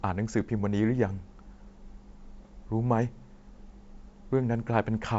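At 2.43–2.49 s, bit errors on an ADPCM link upset the decoder's step size: a rough, popping burst with level jumps, not a silent gap.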